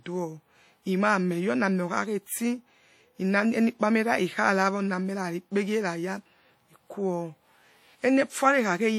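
Throughout the speech, a transform codec has quantised the signal coarsely, most likely WMA compression, with damage plainly audible enough to fit a low rate around 48 kbps. Noise spreads across each long block, so the sound rings and washes, with hiss that rises and falls alongside it.

From 2.25 to 2.28 s, just after "oni ameh", the codec spread the noise sized for a sharp attack back over the quiet moment before it. This pre-echo lasts about 29 ms and is heard as a brief hiss leading into a softened, smeared onset.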